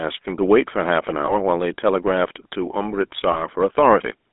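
A speech clip that's been through the GSM full-rate codec the whole way, squeezed into a narrow 250 Hz to 3.6 kHz line band, with the buzzy, gravelly roughness you'd expect from that old 13 kbps coder rebuilding the voice from a vocal-tract model and sparse pulses. There are also lost GSM frames at 1.26 to 1.34 s and 3.32 to 3.37 s. Each sounds like a single dropped frame, where the decoder just repeats the last good frame, so you get a brief metallic, ringing hold instead of a gap.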